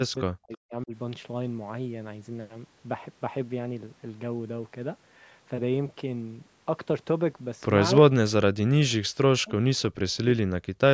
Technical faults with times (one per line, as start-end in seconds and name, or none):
0.05-0.93 speech suppressed in double talk
8.10-8.14 speech suppressed in double talk
8.41-10.93 speech suppressed in double talk